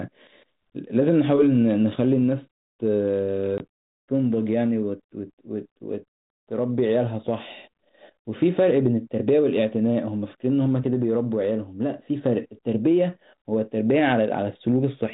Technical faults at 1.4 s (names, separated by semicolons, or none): none